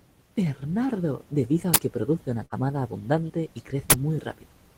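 At 1.74 to 1.76 s, just before "que produce una", an uninitialised buffer plays a 20 ms loud crack. The block was sent out before any audio was written into it. The same fault returns at 3.90 to 3.92 s, after "abundante y". Between them, at 2.45 to 2.54 s, comes a burst of packet loss. The last sound is held and fades for 62 ms. About 60 ms of speech is missing before "abundante y".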